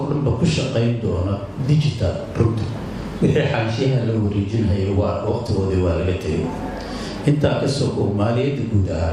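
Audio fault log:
No audible faults detected.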